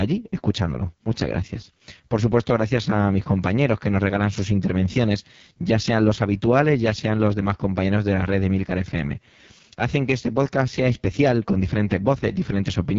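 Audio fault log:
Throughout: AMR wideband (HD Voice) codec. The speech sounds rough and raspy, which fits the lowest 6.6 kbit/s mode, where the pulse-driven vocal model gets too few bits to follow the voice cleanly. Nothing comes through above 7.3 kHz.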